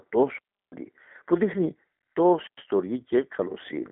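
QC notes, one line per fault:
Throughout: G.729 codec. The speech sounds narrow and boxed-in, with a slightly rough, synthetic edge. Nothing above about 3.8 kHz survives, and the lows below roughly 200 Hz are thin, as on a phone line. The damage is plainly audible. Its character fits G.729A at 8 kbit/s: the codec doesn't keep the waveform but rebuilds the speech from a vocal tract filter, a pitch predictor and a few sparse pulses per frame.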